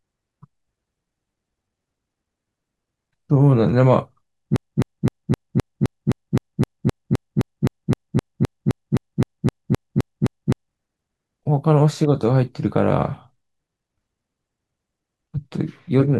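From 4.56 s to 10.71 s the speech locks into a broken-record loop: a fragment about 0.26 s long plays back to back 24 times, identical on every pass, before normal audio returns. The likely cause is a stalled player or stream that kept resending the last fragment it held, so the speech due in those six seconds is gone. Unlike a stutter or packet-loss glitch, the repeats never vary or decay, and they sustain a steady mechanical rhythm.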